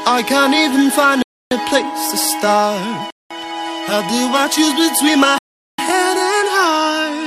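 A likely Bluetooth stall, where delayed packets let the headphone buffer run dry, cuts the sound to silence three times: 1.22 to 1.51 s (288 ms), 3.10 to 3.31 s (201 ms) and 5.38 to 5.79 s (402 ms), with playback resuming after each gap.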